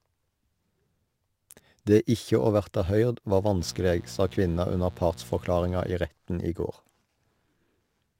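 From the first moment to the end, a fine hiss and grainy roughness ride along with the speech. It swells on loud passages and sharp, bright sounds and disappears in the pauses. This is sample clock jitter: the converter's timing wobbles by a few microseconds, so each sample lands slightly early or late. Where the waveform is changing fastest, that timing slip becomes the largest amplitude error, leaving noise about 35 dB below the speech.

At 3.56 s, right after "å verta høyrd var", a hard, raspy buzz cuts in and holds steady until 5.95 s, just before "i retten i". It sits about 20 dB below the speech. This is mains buzz at 60 Hz: sharp switching spikes from something like a dimmer, a rectifier or an unshielded cable leak into the signal twice per cycle, spreading harmonics up into the kilohertz range.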